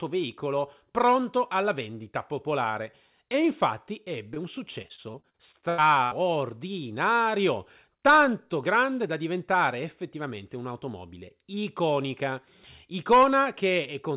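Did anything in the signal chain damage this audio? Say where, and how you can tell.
Yes. At 4.34–4.38 s, short concealed packet loss on the network: about 20 ms arrived late, and the decoder extended the preceding sound, leaving a brief smear.

From 4.82 to 6.13 s, repeated packet loss (robotic sound): recurring holes up to 84 ms, a quarter of the span patched, make the speech choppy.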